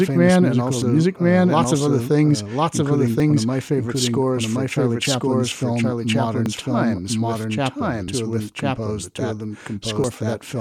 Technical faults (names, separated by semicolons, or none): doubled audio track; dropped buffer (overrun)